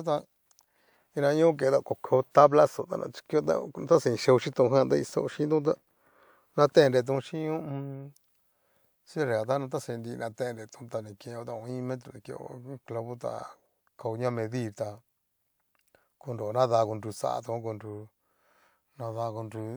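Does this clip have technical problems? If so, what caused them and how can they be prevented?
No, this clip has no technical problems to report.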